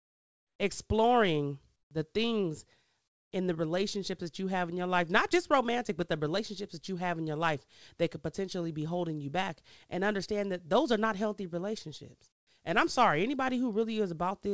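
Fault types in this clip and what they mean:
Comfort noise in place of the background: in the pauses the real background turns into a flat, featureless hiss about 11 to 20 dB quieter, likely from discontinuous transmission.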